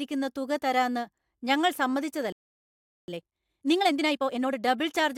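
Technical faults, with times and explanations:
2.32–3.08 s, playback stall: the speech cuts out mid-flow for about 0.76 s of silence, likely the player starving for data, then resumes where it stopped rather than skipping ahead.
3.08–4.58 s, time-compressed catch-up: speech runs at 1.5 times normal speed while pitch stays unchanged, from spliced, cross-faded pieces, unlike a sped-up tape's raised pitch.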